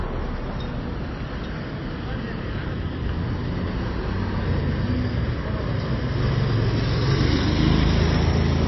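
From start to end, the audio is dull and band-limited. Nothing is heard above about 5.8 kHz. The damage is plainly audible throughout. Weak detail drops in and out from moment to moment, giving a watery, swirling texture. This points to heavy MP3 compression as the likely cause, at a rate that fits around 24 kbps. With so few bits, the encoder cuts the treble at a fixed frequency and discards quieter frequency lines to save data.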